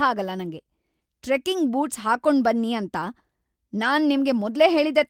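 No technical faults can be heard in this recording.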